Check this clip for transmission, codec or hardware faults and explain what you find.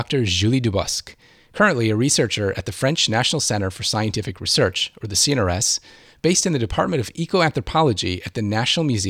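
No transmission, codec or hardware faults are audible here.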